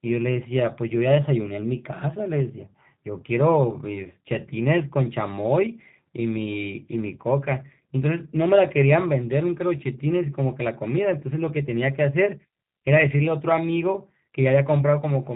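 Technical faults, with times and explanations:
Throughout, G.729 codec: the speech has been squeezed to 8 kbit/s through a low-rate VoIP coder that rebuilds it from a vocal tract filter, a pitch predictor and a handful of pulses per short frame. The damage is plainly audible: a rough, faintly synthetic buzz on the voice, with nothing heard above about 3.8 kHz. Unlike a simple low-pass or narrowband telephone line, the roughness comes from the resynthesis itself, not just missing treble.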